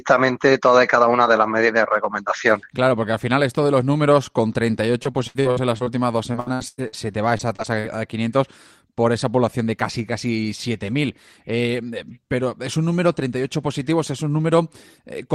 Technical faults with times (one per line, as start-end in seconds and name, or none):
5.03-7.97 repeated packet loss (robotic sound)